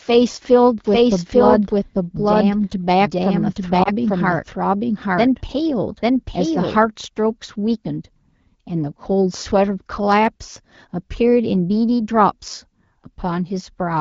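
From 0.85 to 6.85 s a second, full-band copy of the speech runs about a second behind the original at roughly equal loudness, with no reverberant tail, and it starts and stops abruptly. This doubled audio track likely comes from the signal being captured again through a slower path.

Within that stretch, from 3.83 to 3.89 s, there is a short dip or warble in the speech, and it comes back rough for a moment. This is lost AMR speech frames, which points to a single frame failing its check. The AMR-WB decoder filled the gap by repeating its last good settings at falling gain.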